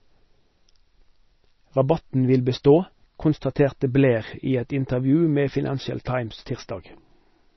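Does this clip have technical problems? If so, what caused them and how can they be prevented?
Yes. Throughout the speech, the encoder likely ran short of bits under MP3 compression, so it discarded everything above a fixed cut-off and zeroed the weaker frequency lines that its hearing model judged expendable. The result is a dull top end with nothing above 5.9 kHz, and a heavy watery, swirling texture as faint components blink on and off between frames. S sounds turn metallic and attacks smear, damage that points to a very low bitrate around 24 kbps. To prevent it, record or export at a much higher MP3 bitrate, or keep an uncompressed or lossless master.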